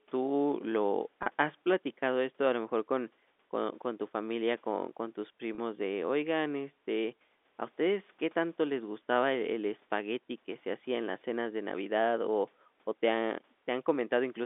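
Packet loss with pitch repetition occurs at 1.23 s and again at 5.55 s, each gap lasting 30 ms, which fits a single lost packet. The receiver bridges each hole by repeating the last pitch period, so the speech briefly holds on a slightly buzzy, sustained tone before normal audio resumes. Both losses are short, so neither fades into silence. The telephone-band G.711 coding, limited to roughly 250 Hz to 3.6 kHz, is the normal line format here, not a fault.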